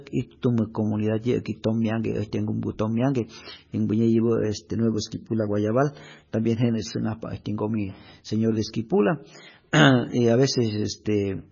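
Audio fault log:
throughout, MP3 compression: nothing above 7 kHz, plus watery, chirping s sounds a clean low-pass wouldn't give, likely heavy encoding, fitting a bitrate near 17 kbps.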